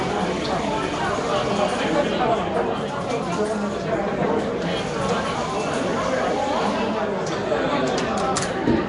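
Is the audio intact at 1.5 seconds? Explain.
No. At 1.5 seconds, as throughout the clip, the sound is rough and hissy, smeared and underwater, with nothing above 10.6 kHz. This is likely Nellymoser compression, whose coarse, fixed bit allocation leaves weak bands filled with noise, consistent with a rate near 44 kbps.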